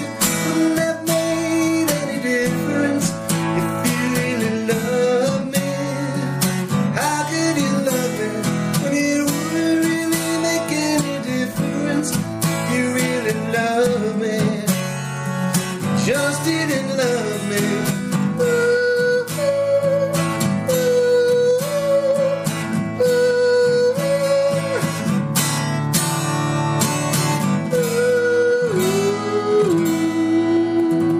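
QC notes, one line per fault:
No technical faults were found in the signal.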